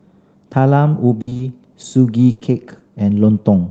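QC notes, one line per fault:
1.21–1.41 s, repeated packet loss (robotic sound): four holes open in quick succession, the longest about 60 ms and 120 ms missing in all. Each is patched by carrying the previous sound forward, so about 60% of this stretch is synthetic, giving a choppy, robotic texture.
2.31–2.39 s, burst of packet loss: about 60 ms of audio never arrives in time to be played. The receiver extends the last sound and turns it down across the gap, heard as a held buzz or fading hiss, before the audio resumes further on with that portion gone.
2.39–2.43 s, short concealed packet loss: right after the burst, another 20 ms hole is filled by extrapolating the preceding sound and blending back into the real signal. It comes across as a brief smear or wobble, heard against the call path's top end, which stops near 8 kHz.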